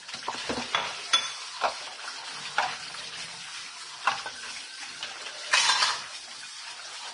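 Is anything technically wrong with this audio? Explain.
Yes, heavy Vorbis compression runs through the whole clip. Nothing comes through above about 10.6 kHz, and the treble sounds hissy and grainy, with roughened tones and smeared attacks. That fits a low bitrate near 32 kbps, likely squeezing fine detail into noise-like residue.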